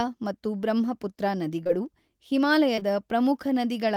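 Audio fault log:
1.63–1.71 s: short concealed packet loss. Two consecutive 20 ms packets never arrived, and the decoder extended the preceding speech across the hole, giving a brief smeared wobble rather than the hard silence of a plain dropout.
2.75–2.83 s: short concealed packet loss. Another pair of 20 ms losses was bridged by continuing the last pitch or noise and fading back into real audio. The result is a soft blur where a short consonant may vanish, not a click or mute.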